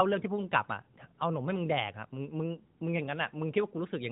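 Nothing in this speech clip stands out as a fault; it comes through the narrowband mobile codec just the way that kind of phone path is meant to sound, with nothing to point at.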